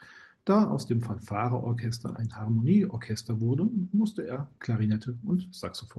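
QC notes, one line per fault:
No faults found in this speech; the audio passes through a normal WebRTC call path, with the top end stopping at 12 kHz, which fits Opus at around 20 kbps.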